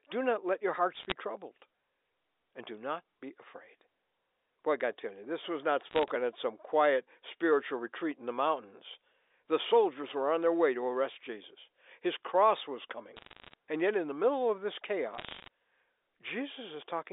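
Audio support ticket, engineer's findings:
Bit errors on a digital phone line: crackle bursts at 0.94–1.12 s after "not let your", 5.89–6.10 s after "you this was not", 13.16–13.54 s after "cross was", and 15.14–15.48 s. Flipped bits on the G.711 A-law link, under one percent. Each error corrupts one sample. Sign and high-bit hits produce sharp ticks over intact speech.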